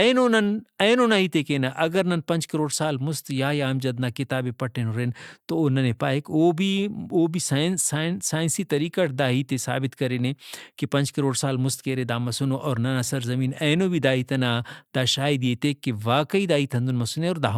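No technical faults turn up anywhere in this speech, so there are none to describe in time order.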